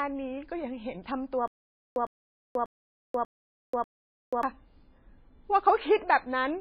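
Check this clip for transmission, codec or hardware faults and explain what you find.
Two faults stand out in this speech clip: heavy MP3 compression across the whole thing, and a stutter with silent gaps in the middle.

The MP3 compression is audible from start to finish. Nothing survives above 5 kHz, so the speech sounds dull and watery, with swirling on the sibilants. That's likely an encoder starved of bits, which fits a very low bitrate of around 18 kbps. It chopped the treble and dropped weak components frame by frame.

The stutter with silent gaps runs from 1.48 to 4.43 s. A 106 ms fragment repeats five times, once every 591 ms, with about 485 ms of dead digital silence between repeats. It likely comes from a stalled player replaying its last chunk on each retry, so the real audio from that stretch is gone.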